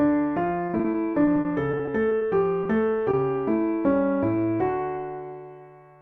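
From 0.67 to 2.23 s the audio breaks into repeated packet loss with a robotic sound. More than a dozen short holes, none longer than about 40 ms, are each patched by extending the preceding sound. Concealment covers roughly a fifth of the stretch. Because the patches come back before the signal can recover, the sound turns choppy and robotic, with small pieces missing. The density of the dropouts is what separates this from isolated losses.

Two single short concealed packet losses follow, at 2.63 to 2.67 s and at 3.11 to 3.15 s. In each, a few hundredths of a second failed to reach the decoder, and the receiver continued the last sound before blending back into the real signal. Each is heard as a brief smear or wobble that passes quickly, and neither is followed by further gaps. That lone, momentary character distinguishes these events from the sustained robotic stretch before them.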